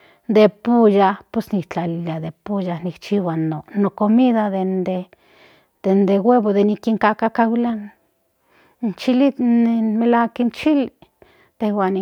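Speech recording, no audible technical faults anywhere in the clip.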